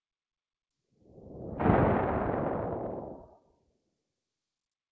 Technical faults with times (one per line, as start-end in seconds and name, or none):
3.15-3.97 sound cut by the noise suppressor